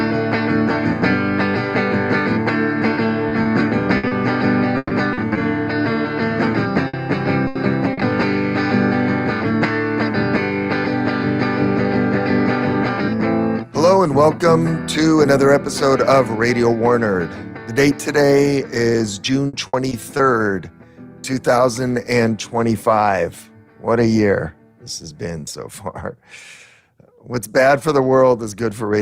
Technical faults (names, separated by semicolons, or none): repeated packet loss (robotic sound); burst of packet loss; short concealed packet loss